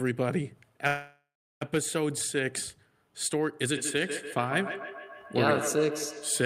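From 0.87 to 1.63 s the sound stalls for about 0.74 s: the last sound is stretched into a fading buzz that drops to near silence for roughly 0.37 s, then resumes where it stopped with nothing lost. This is a call audio freeze, likely from delayed packets emptying the jitter buffer.

From 3.64 s to the end, a feedback echo between two devices sets in. Each sound returns at a fixed interval of roughly 150 ms, thinner and more ringing with each pass, peaking about 8 dB below the speech, as a second device's playback leaks back into the microphone.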